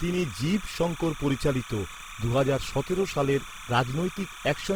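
A short speech recording carries two faults from start to finish. The first is timecode bleed: a steady chirping warble sits behind the speech at about 15 dB below it. The square-wave code flips between tones near 1 kHz and 2 kHz and repeats at 30 frames per second, which points to linear timecode leaking in from an adjacent track or cable. On a spectrogram it appears as thin horizontal bands at 1 kHz and 2 kHz, with odd harmonics stacked above them, running unbroken beneath the speech. The second is Opus compression, the likely cause of the rough, grainy texture across the whole clip. Tonal parts of the speech turn noisy instead of swirling. The bands stay filled, but their fine structure is replaced by folded or synthetic noise, which fits the codec's CELT mode at a low bitrate around 16 kbps. Bandwidth is still fullband. On a spectrogram, energy reaches about 20.2 kHz, but the upper region looks smeared and speckled, and harmonic lines break into blocky, noise-like patches.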